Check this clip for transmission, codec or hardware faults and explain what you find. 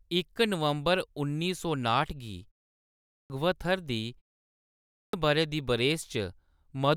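There's one problem here: clipped start after a pause, twice. At 2.89 to 3.30 s and 4.70 to 5.13 s, the output device dozes off during short pauses of 0.46 s and 0.57 s. It then swallows about 0.41 s and 0.43 s of speech, so the speech starts abruptly.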